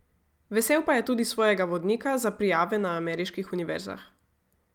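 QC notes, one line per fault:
Nothing to log: the clip has no fault.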